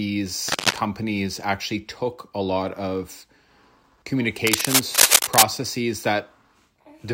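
From 0.48 to 0.79 s, and again from 4.47 to 5.43 s, dense, uneven bursts of scratchy noise cover the speech, first at roughly the speech level, then somewhat louder. This is cable scratch noise, likely from a worn cable or connector being moved, its contact resistance fluctuating rapidly.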